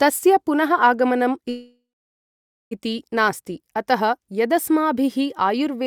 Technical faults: call audio freeze

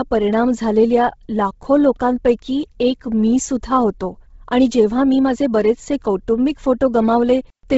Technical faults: Bluetooth LC3 compression

